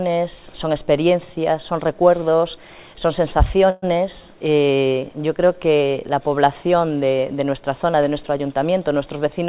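At 3.70 s, packets most likely stalled in transit and the jitter buffer ran dry, a call audio freeze. For about 124 ms, until 3.84 s, the receiver stretches the last sound into a fading buzz or hiss, then resumes where it stopped, with nothing lost.

From 9.05 to 9.41 s, the jitter buffer held more audio than its target and trimmed short pitch-period pieces repeatedly, a jitter buffer speed-up. Roughly 50 ms disappears, so the sound runs at about 111% speed at unchanged pitch and feels hurried. The narrow band, with nothing above 4 kHz, fits the G.711 call path.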